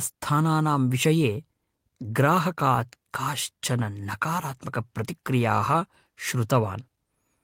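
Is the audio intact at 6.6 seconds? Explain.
Yes, the audio is intact at 6.6 seconds, without any audible fault.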